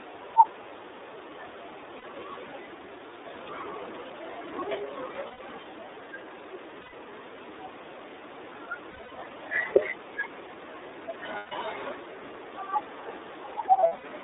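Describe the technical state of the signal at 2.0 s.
Packets were lost from 1.97 to 2.05 s, a 60 ms gap that fits two 30 ms frames, so the decoder repeats the last pitch cycle mixed with noise, heard as a brief held, slightly buzzy vowel before clean recovery. Throughout, the iLBC codec at 13.33 kbps limits the band to about 300 to 3700 Hz, giving plainly audible rough, synthetic-sounding narrowband speech.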